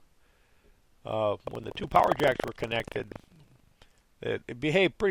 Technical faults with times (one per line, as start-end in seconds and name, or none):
1.44-3.79 buffer tearing